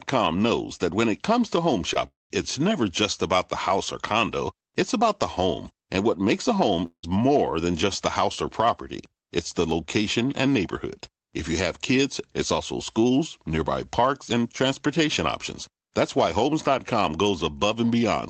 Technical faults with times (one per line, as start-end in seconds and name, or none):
1.93-1.97 short concealed packet loss
2.07-2.44 long network dropout
6.86-7.05 long network dropout